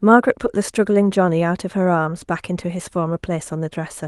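No audible technical faults.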